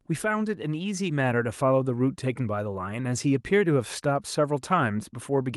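Nothing here calls for comment, since the speech comes across with no technical faults to pick out anywhere along the way.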